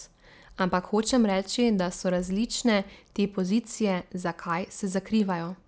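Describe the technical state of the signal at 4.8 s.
At 4.8 s you're hearing the resampler restarted on every block, a fault that runs through the whole clip. Each 100 ms block was converted on its own, which fits a 48 kHz to 16 kHz conversion, so every block edge, 4.8 s included, carries a small error. That comes through as a steady 10 Hz ticking under the speech.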